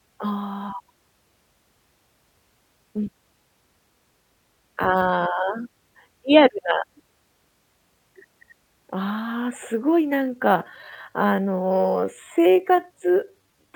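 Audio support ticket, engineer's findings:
Time-stretched section, 10.1 s to end: speech slows to about 0.74x with pitch unchanged, dragging; likely stretch algorithm repeating short segments. Spectrogram shows elongated harmonics.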